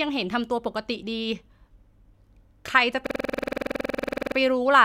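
From 3.07 s to 4.37 s the speech freezes into a system hang loop. A single 46.4 ms slice of audio repeats exactly, 28 times, at 21.5 Hz, which fits a 2048-sample ring buffer that the hardware kept replaying after the host stopped refilling it. It sounds like a rattling, motorised stutter. Unlike packet-loss concealment or a skipping read, every cycle is identical, with no fading or variation, and the speech resumes afterwards with essentially nothing missing.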